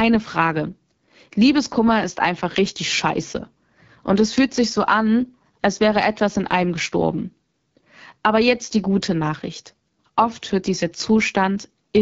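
From start to finish the speech sounds rough and raspy. This is AMR wideband (HD Voice) codec damage: the vocal tract model is starved of bits, and the harshness fits one of its lowest modes, around 8.85 kbit/s.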